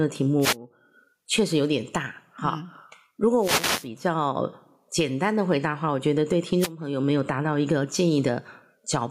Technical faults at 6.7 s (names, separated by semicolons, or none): gain pumping; wireless microphone noise hit